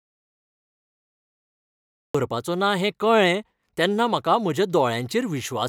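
An audio dropout to silence runs from the very start of the clip until 2.15 s: the speech is already cut out when playback begins and only comes in at that point. For those first two seconds there is silence, without even the faint room tone that normally sits beneath speech. That total blankness is the sign of silence being written, likely because the input was lost, through a disconnected device, a broken link or a mute, while recording carried on.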